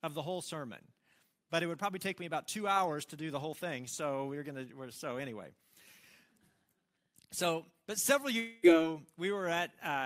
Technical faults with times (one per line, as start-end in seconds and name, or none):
8.39-8.65 long network dropout